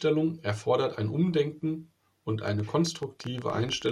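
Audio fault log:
2.48–3.92 s: train of clicks, about fifteen irregularly spaced pops at 10.7 per second, peaking about 5 dB above the speech, likely interference or a faulty connection or power supply.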